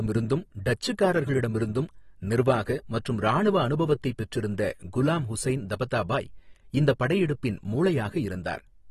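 AAC compression runs throughout the speech, from start to finish, and the damage is plainly audible. Nothing is present above 12.4 kHz, so the highest frequencies are simply missing and the sound is dull. The likely cause is an AAC-LC encoder short of bits, discarding high bands and coarsely quantising the rest, which fits a bitrate around 36 kbps. Sibilants turn fizzy and smeared, and sustained sounds take on a warble.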